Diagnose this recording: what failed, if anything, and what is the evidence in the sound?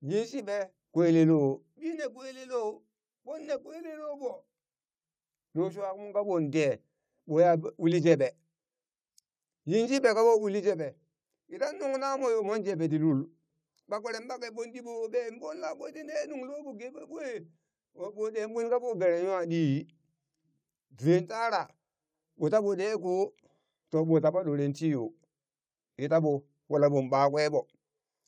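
Nothing stood out on listening to this speech recording that would point to a failure at any stage of the chain.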